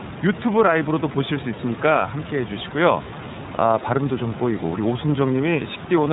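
iLBC codec damage runs throughout the speech, plainly audible from start to finish. The codec works in 30 ms frames, coding each frame's excitation independently of the previous one, which fits its 13.33 kbps mode. It passes nothing above 4 kHz, so the speech sounds band-limited and takes on a rough, synthetic texture. The room noise, about 12 dB below the speech, goes through the same narrowband coding.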